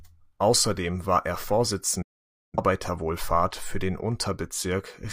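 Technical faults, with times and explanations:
2.02 to 2.59 s, digital broadcast dropout: the speech fades out in about 8 ms and goes fully silent as the receiver mutes over corrupted or missing frames. The gap fits roughly a dozen lost frames. The waveform flatlines and the spectrogram shows a blank vertical band before the speech resumes, with the lost audio gone.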